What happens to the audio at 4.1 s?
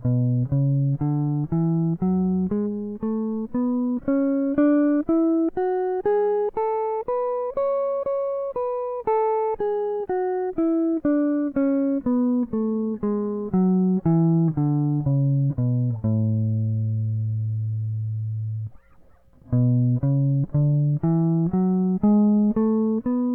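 Repeated frames hit the music at 4.03 to 4.06 s. A 30 ms block of compressed frames plays twice, causing a brief stutter, and adding 30 ms.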